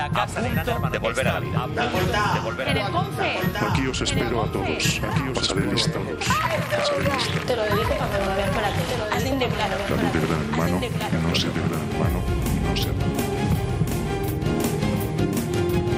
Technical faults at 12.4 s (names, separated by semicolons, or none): doubled audio track